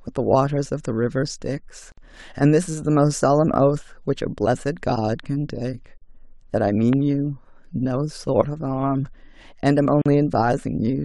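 A speech recording with two kinds of fault. A gap at a join of encoded pieces occurs three times, roughly every 4 s: 1.92 to 1.98 s (57 ms), 5.98 to 6.02 s (40 ms) and 10.02 to 10.06 s (40 ms). Each is where separately encoded chunks were butted together with the encoder's start delay and final-frame padding left in, so the speech stops dead and resumes where it left off. On a waveform each gap is a flat stretch with smeared edges; on a spectrogram it is a thin vertical band blank across all frequencies. A loud pop sits at 6.93 to 6.95 s as a single sharp click roughly ten dB above the speech, which continues underneath. It is likely an electrical transient such as a plug, switch or static discharge. It shows as a tall narrow spike on the waveform and a bright full-height vertical line on the spectrogram.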